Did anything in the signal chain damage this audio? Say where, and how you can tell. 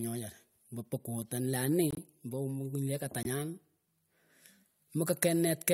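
Yes, at the codec decoding stage: corrupt frames muted in two places, in this speech at 1.91–1.99 s (about 80 ms) and 3.23–3.26 s (about 30 ms). Each gap cuts in abruptly with no fade, and the speech resumes on schedule, so timing is preserved. The decoder rejected damaged compressed frames and playback substituted silence. On a waveform these are flat silent blocks with hard edges; a spectrogram shows clean vertical empty bands across every frequency.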